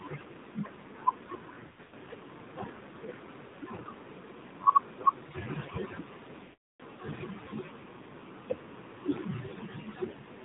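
Throughout, the speech is muffled and buzzy with a synthetic edge, and nothing above 4 kHz comes through. This is the AMR narrowband mobile codec at 7.4 kbps, where the encoder's few pulses per subframe plainly fail to capture the voice.

From 1.60 to 1.94 s the sound stutters with scattered dips and warbles, the longest lasting about 80 ms. A brief 60 ms dip follows at 3.46 to 3.54 s. From 6.44 to 6.82 s the sound smears, stretches, fades to silence, and returns weak or rough. These are lost AMR speech frames. The decoder repeated its last good pitch and vocal tract settings at falling gain to conceal the gaps.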